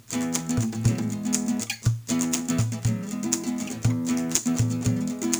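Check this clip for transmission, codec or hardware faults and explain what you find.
One fault runs through the whole clip: crude rate conversion. The audio sounds like it was raised from 32 to 48 kHz by simply repeating samples, with no interpolation filter. That leaves a patterned error about 20 dB below the signal, heard as a gritty, inharmonic fizz riding on the louder and brighter sounds.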